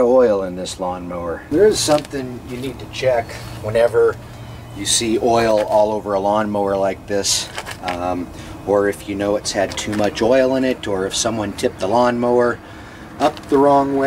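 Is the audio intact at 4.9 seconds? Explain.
Yes, at 4.9 seconds the audio is intact, with no dropout, click, distortion or other fault at that moment.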